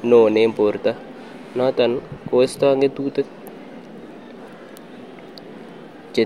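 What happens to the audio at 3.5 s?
Nothing goes wrong at 3.5 s: the speech runs through that moment intact, with no dropout, click, distortion or other fault to be heard.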